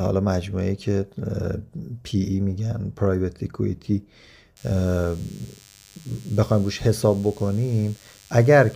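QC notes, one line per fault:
4.57–8.76 s, DECT cordless phone buzz: a thin 100 Hz buzz rich in harmonics sits well below the speech, from nearby DECT radio bursts rectified in the audio circuit.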